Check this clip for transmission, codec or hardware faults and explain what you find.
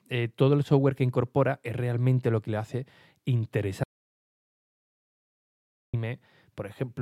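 There is one fault, an audio dropout to silence from 3.84 s to 5.94 s. The speech cuts off abruptly and about 2.1 seconds of silence follow, with no room tone, before it resumes mid-flow. The input signal was likely lost, while recording continued writing silence.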